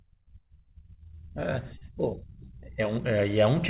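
At 1.78 s the speech smears briefly, a wobble lasting about 50 ms. This is short concealed packet loss. Some 40 ms of audio arrived too late, and the receiver covered 33 ms by extending the preceding sound before blending back into the real signal. Everything is capped at 4 kHz by the narrowband call path.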